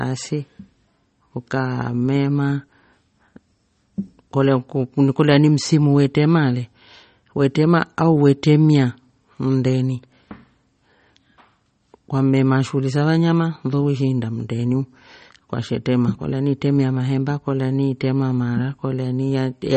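MP3 compression runs throughout the speech, and it is likely the cause of the damage, which is plainly audible. Nothing comes through above 8.4 kHz. The encoder sounds starved of bits, which fits a bitrate around 32 kbps. It removes the top band outright and lets weak frequency lines switch on and off from frame to frame. The result is dull and watery, with swirling texture, metallic chirps on s sounds and smeared consonant attacks.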